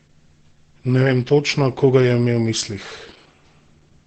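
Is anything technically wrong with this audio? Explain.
Yes. Throughout, the speech sounds muffled, hoarse and heavily degraded, with nothing above 8.5 kHz. The likely cause is Opus compression in its SILK speech mode, which narrows the bandwidth and roughens the voice, and points to a bitrate near 12 kbps.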